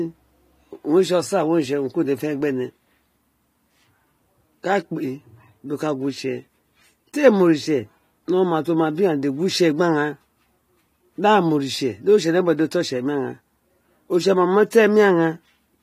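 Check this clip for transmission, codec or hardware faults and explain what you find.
There's one codec fault in this speech clip, right near the end. At 14.70 s there's pre-echo: a sharp attack sits late in a transform block, so the quantisation noise meant for the loud part smears about 17 ms ahead of it, leaving a brief hiss and a softened onset.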